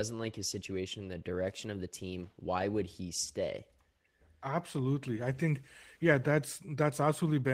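No technical faults can be heard anywhere in the recording; the signal stays continuous and steady throughout.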